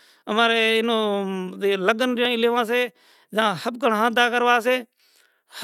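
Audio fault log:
2.25 s, overlap between stream segments: right before "لیو سے جھاں ھبکڑں" there's a tiny skip. Two segments, around 6 s each, claimed the same stretch of time, so the player trimmed about 14 ms that wasn't actually doubled, and the waveform jumps across the gap.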